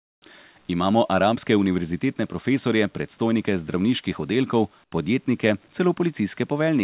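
Speech heard through a narrowband call path with nothing above 4 kHz, which fits G.711 telephone coding. It has comfort noise in place of the background from 0.00 to 0.22 s (about 35 dB quieter) and from 4.84 to 4.92 s, after "profesorje predstojnike zdravniških oddelkov" (about 14 dB quieter). The real background becomes smoother synthetic noise, likely from discontinuous transmission, rather than true silence as in a dropout.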